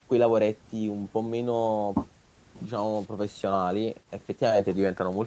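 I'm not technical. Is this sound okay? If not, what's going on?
Yes, this speech sounds fine, with no problems heard.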